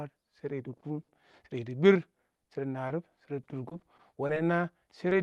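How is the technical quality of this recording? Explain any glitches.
The recording has repeated network dropouts that give the speech a choppy, robotic quality in three stretches, plus one brief glitch near the end. It came through a call codec whose top end stops around 12 kHz, which fits Opus at roughly 40 kbps.

Repeated packet loss (robotic sound), 0.77–1.35 s, 2.15–2.48 s and 2.88–4.38 s: Audio packets repeatedly failed to arrive in time. The receiver patched each hole by extending the preceding sound, then hit the next hole shortly after. Gaps run up to 60 ms in the first stretch and 20–30 ms later, with about a fifth of the shorter stretches synthesised. The speech turns choppy, with fragments missing.

Short concealed packet loss, 5.09–5.13 s: About 20 ms of audio went missing. The decoder bridged the gap by carrying the previous sound forward, then blended back into the real signal. 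It is heard as a brief smear or wobble, and a short consonant there can drop out.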